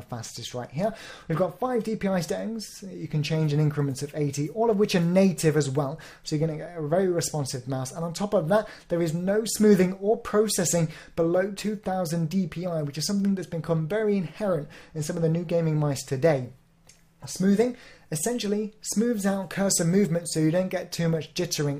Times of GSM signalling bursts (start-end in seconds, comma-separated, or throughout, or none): none